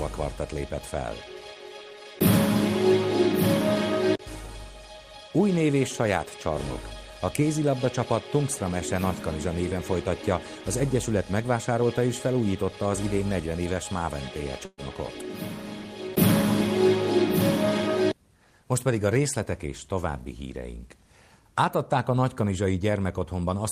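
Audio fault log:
14.65–14.81 s, burst of packet loss: the receiver stretches the last sound for about 120 ms, fading it, then 30 ms of silence, and playback resumes with about 120 ms skipped. Unlike a plain dropout, the gap begins as a decaying continuation, not abrupt silence.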